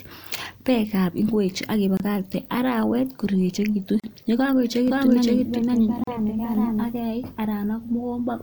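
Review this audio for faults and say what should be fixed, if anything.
The speech drops out briefly at 1.97 s, 4.00 s and 6.04 s, for 26.5, 37.6 and 37.6 ms, every 2.0 s. That's a gap at a join of encoded pieces: encoder delay and end-frame padding left in at each seam.

From 4.88 to 6.89 s there's a doubled audio track: a second copy, about as loud and around half a second behind, starting and stopping abruptly. It's likely a second capture path or an edit holding two offset copies.

To prevent both, trim encoder delay and padding before joining pieces, and make sure only one capture or edit layer feeds the mix.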